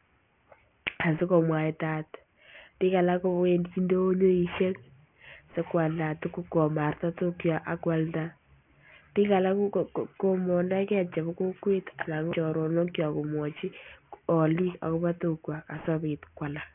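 From start to finish the speech has a gritty, metallic edge: sibilants come out harsh and buzzy, and the spectrum stays full right up to a hard wall at 3 kHz. This is aliasing. The audio was taken from 44.1 kHz down to 6 kHz without a low-pass filter, so everything above 3 kHz folded back below it onto unrelated frequencies, landing roughly 20 dB under the speech itself.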